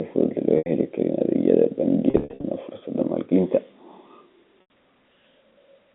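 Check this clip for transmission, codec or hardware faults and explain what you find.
Packet loss with pitch repetition occurs three times, over narrowband G.711 telephone audio. Each time, the receiver loops the last pitch period to fill missing packets. This gives a held, buzzy tone that fades toward silence before the speech cross-fades back. The three gaps are at 0.58 to 0.66 s (80 ms), 2.10 to 2.44 s (240 ms lost in scattered bursts, the longest 60 ms), and 4.61 to 4.70 s (90 ms).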